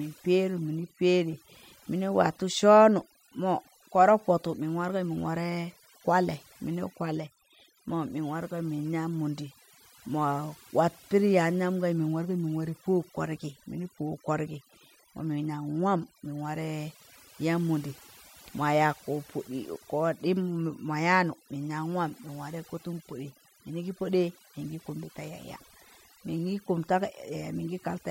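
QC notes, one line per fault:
Throughout: overdone noise removal. A noise reduction stage was set too aggressively for a noisy recording, so every frequency band that sits close to its noise estimate is pulled right down or gated off, and the quieter parts of the speech are caught along with the noise. The background drops and breaks up into twinkling specks, while the voice is stripped of its softer detail.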